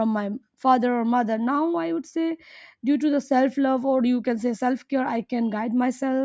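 Nothing in the speech stood out on listening as a technical fault.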